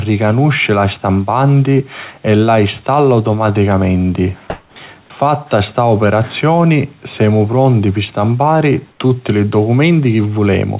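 At 4.5 s, after "e la installa automaticamenti", and at 8.92 s, after "semu pronti pi stampari", the background becomes flat, featureless hiss for 260 ms and 80 ms. It is about 12 dB louder the first time and about 4 dB quieter the second. This is likely comfort noise in place of the background during discontinuous-transmission pauses.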